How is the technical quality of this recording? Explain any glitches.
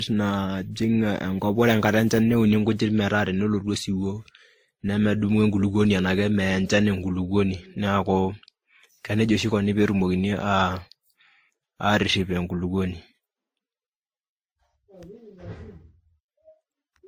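The recording's technical quality is reduced by stacked compression damage that runs through all of it. Throughout, the speech has watery, swirling smearing mixed with a thin metallic graininess. The likely cause is transcoding between lossy codecs, with a final WMA-type stage re-encoding an earlier low-bitrate codec's errors and adding its own. On a spectrogram, the upper bands look blotchy and patchy, and the content stops at about 20.1 kHz.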